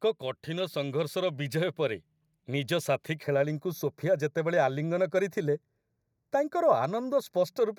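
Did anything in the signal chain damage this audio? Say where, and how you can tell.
Yes. From 0.45 s to 2.8 s the level climbs steadily by about 5 dB. The speech and the background noise rise together, which points to automatic gain rising in the call-processing stage. The AGC judged the input too quiet and raised its gain gradually, lifting everything, not just the talker. On the waveform the envelope widens smoothly over those seconds. On a spectrogram the whole picture, including the noise floor between syllables, brightens evenly across all frequencies.

From 3.23 s to the end, the speech turns hollow and phasey, the sound of channel delay (comb filtering) at the driver or buffer stage. One channel arrives roughly 0.15 ms late, which fits an offset of a few samples, and the two are summed to mono, so shared content cancels at regularly spaced frequencies. A spectrogram shows fixed dark horizontal bands, the first near 3 kHz and more evenly spaced above it, staying put while the speech moves around them.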